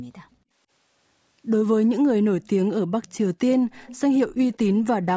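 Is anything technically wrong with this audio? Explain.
Yes. From 0.29 to 0.51 s the room sound dips sharply, by about 28 dB at its deepest, for roughly 150 ms in total. This is background gated by the echo canceller, which clamped the microphone while the loudspeaker played.

A faint delayed copy of the speech trails behind at 0.32–0.36 s, 3.03–3.17 s, 3.71–4.00 s (clearest) and 4.54–4.58 s, lagging by 194 to 215 ms. This is likely an echo leak, where a loudspeaker's output reached the far-end microphone and the canceller didn't fully remove it.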